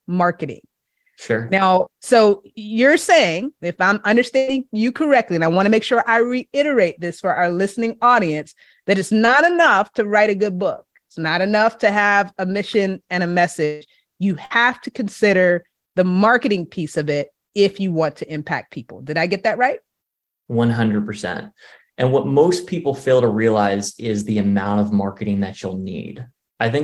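At 4.37 to 4.49 s, between "you're saying if I'm" and "you correctly and I", a burst of packet loss leaves about 100 ms of audio extrapolated from the last sound. It fades out as a held buzz or hiss, showing as a flat, smeared texture and a shrinking waveform envelope.

At 9.25 to 9.29 s, after "listening audience that it's" and before "enough to write a", a short concealed packet loss covers about 20 ms. It is heard as a brief smear, with a thin vertical discontinuity in the spectrogram.

At 13.65 to 13.83 s, after "a mission and a", about 160 ms are replaced by a decaying buzz or hiss with no silent stretch. This is likely a long network dropout, and it looks like frozen, fading bands.

At 14.45 to 14.52 s, another burst of packet loss replaces about 60 ms with a shorter fading continuation that shows the same frozen texture in the spectrogram.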